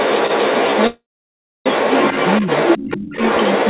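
From the start to the end of the clip at 3.69 s, a second voice runs under the speech at roughly the same loudness. This is the other side's voice leaking through, likely because echo cancellation left part of the far end's loudspeaker sound in the microphone pickup.

From 0.87 s to 1.67 s there is a call audio freeze. The last sound is stretched into a fading buzz or hiss and then falls into about 0.64 s of silence. The speech then resumes where it stopped, so nothing is lost, only delayed by about 0.79 s, likely from delayed packets draining the jitter buffer.

Between 2.96 s and 3.08 s the speech briefly dips, by as much as about 30 dB at its deepest and over roughly a tenth of a second in total. This is speech suppressed in double talk, with both sides likely active at once and the canceller turning the near talker down along with the echo.

Throughout, the audio has no content above 4 kHz, which fits a narrowband call codec.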